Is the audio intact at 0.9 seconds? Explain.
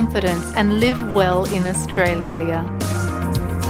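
No. A short stall from a late packet spans 0.89 to 0.92 s, then again 0.97 to 1.01 s. The jitter buffer emptied, so the last sound is stretched 20 and 30 ms before resuming with nothing lost. A spectrogram shows briefly frozen, flat bands.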